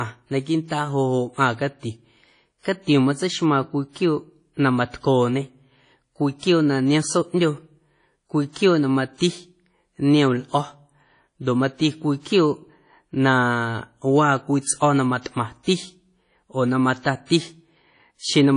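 WMA compression damage runs throughout this speech clip, and the sound is likely the work of a transform codec at a low bitrate, on the order of 32 kbps. Nothing is present above 10.1 kHz, and the encoder's long blocks smear quantisation noise over tens of milliseconds, so the speech sounds ringing and washy. A hiss swells and recedes with the speech, and the weaker spectral detail has been zeroed out.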